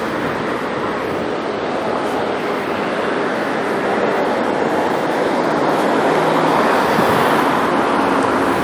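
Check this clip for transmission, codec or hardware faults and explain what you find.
No transmission, codec or hardware faults can be heard in this audio. There is nothing here to flag.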